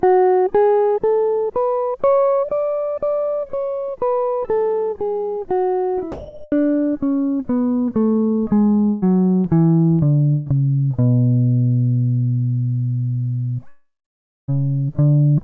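At 6.12 s the music gives way to a steady, featureless noise for about 0.4 s before returning at 6.52 s. This is sound dropped by the voice detector, which likely mistook the music for background, stopped sending, and had comfort noise played in its place.

From 8.90 to 9.04 s the last sound is held and fades for 120 ms, then the music resumes further along with that stretch missing. This is a burst of packet loss: consecutive packets never arrived in time, so the receiver extended what it had.

At 9.40 s a brief smear of about 40 ms is heard as the music wobbles and then blends back. This is short concealed packet loss, where a few hundredths of a second were patched by continuing the preceding sound.

Two more bursts of packet loss follow. From 9.92 to 10.03 s about 60 ms is replaced by a fading continuation. From 10.32 to 10.48 s the held sound lasts about 140 ms before the music jumps ahead.

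From 13.68 to 14.50 s the music trails off into a decaying tail and then about 0.55 s of near silence, and resumes with roughly 0.8 s gone. This is a long network dropout, likely a stretch where no audio arrived at all. Throughout the clip nothing is heard above 8 kHz, which fits a wideband call codec such as G.722 at 64 kbps.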